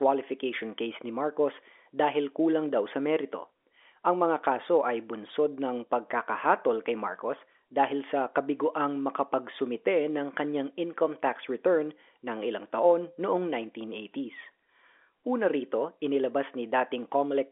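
Nothing goes wrong anywhere in this speech recording, which just carries the usual narrow, boxy sound of an ordinary telephone line running over G.711 coding.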